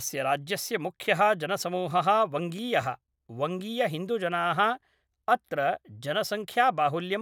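Just a speech recording, and there's nothing technically wrong to point to anywhere in it.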